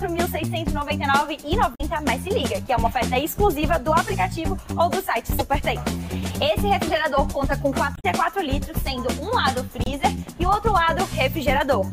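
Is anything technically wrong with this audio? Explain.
Yes. Four short glitches break into the sound, at 1.71 to 1.81 s, 5.38 to 5.41 s, 7.93 to 8.05 s and 9.84 to 9.88 s, each a brief disruption lasting between about 30 and 120 ms. This is damaged data in a compressed stream: some bytes in the encoded file were lost or overwritten, so the decoder misread those frames, lost its place and had to hunt for the next valid frame header before playback recovered.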